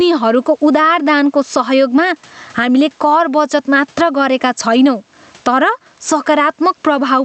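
A recording of speech with gain pumping throughout, most likely from input gain set far too high with a fast limiter clamping down on every loud sound. The gain swings by around 15 dB, leaving loud and soft passages squashed together.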